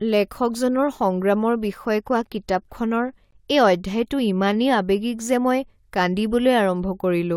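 At 3.31 s the speech drops out abruptly for about 18 ms, a brief hard-edged hole of pure silence that sounds like a tiny click or stutter rather than a fade. This is a gap between stream segments: the time stamps of two adjacent segments don't quite meet, so the player inserts silence to bridge them. The position fits segments about 6 s long. No speech is lost; the 18 ms of silence simply delays everything after it.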